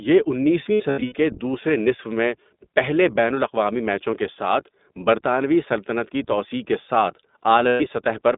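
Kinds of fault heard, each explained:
iLBC codec: This is a narrowband VoIP codec that codes each short frame on its own. Here the speech sits in a band of roughly 200 Hz to 3.7 kHz, so it sounds thin and muffled at the top. The damage is plainly audible, with a rough, slightly synthetic edge on every phrase. The sound fits the 15.2 kbps mode with 20 ms frames. It lasts the whole clip.
lost iLBC frames: Packets went missing, and the decoder filled each gap by repeating the last pitch cycle with added noise. The first loss runs from 0.64 to 1.16 s, just before "کے دوسرے نصف میں". About 260 ms is lost, scattered over roughly 480 ms, with the longest run near 70 ms. It sounds like brief buzzy, held vowels. The second loss, from 7.68 to 7.82 s, follows "کی توسیع کے ساتھ" and lasts 120 ms. Each recovers almost at once.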